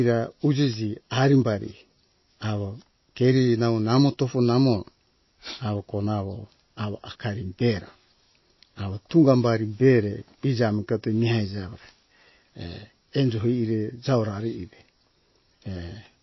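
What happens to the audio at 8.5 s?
At 8.5 s, as throughout the clip, the speech shows likely MP3 compression at a bitrate that fits about 24 kbps. Everything above 5.8 kHz is cut and weak frequency lines flicker between frames, leaving a dull, plainly watery, swirling sound.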